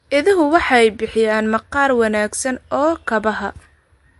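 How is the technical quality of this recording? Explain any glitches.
The recording is clearly degraded by compression throughout, audibly enough to colour the whole clip.

From start to finish, the speech sounds watery and swirly, and everything above 11.3 kHz is gone. This is likely MP3 compression at a low bitrate, consistent with roughly 48 kbps. Short of bits, the encoder cuts the treble at a fixed point and drops weak frequency lines, which flicker on and off between frames. On a spectrogram this shows as a hard horizontal ceiling at 11.3 kHz, with patchy, blotchy gaps below it.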